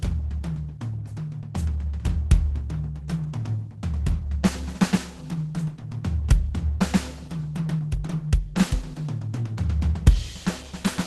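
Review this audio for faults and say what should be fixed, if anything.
Throughout the music, the encoder was starved of bits: likely Opus compression at a very low rate, in the region of 16 kbps, forced into its hybrid speech mode with a super-wideband limit near 12 kHz. The result is plainly muffled and hoarse, with grainy, noisy tones. Encode music at a higher bitrate so Opus stays in its full-band music mode.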